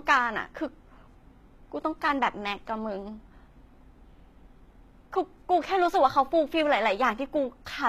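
From start to finish the treble of the speech sounds bright but synthetic: s sounds come out gritty and lisping, with a metallic sheen that does not sit naturally on the lower voice. This is likely HE-AAC compression, where only the lower spectrum is actually coded and the upper band is rebuilt by copying lower content upward under a coarse envelope, so harmonics fail to line up; the plainly audible damage fits a low bitrate around 20 kbps.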